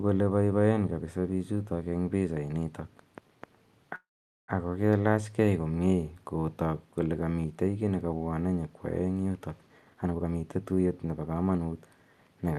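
Speech carried over a call, with highs rolled off above about 12 kHz, which fits an Opus path at around 32 kbps. At 3.95 s the sound stalls: a brief trailing buzz, then near-silence for roughly the last 0.46 s of a 0.53 s gap, before the speech resumes at 4.50 s with nothing lost. This is a call audio freeze, likely from packets being held up until the jitter buffer ran dry; the receiver stretched the final sound into a gap and then carried on, adding about 0.53 s of delay. From 9.66 s to 11.59 s the speech becomes hurried, running at about 128% of normal speed while the pitch stays the same. This is a jitter buffer speed-up: with excess audio queued, the receiver trimmed short pitch-period slices repeatedly, removing roughly half a second to pull the delay back down.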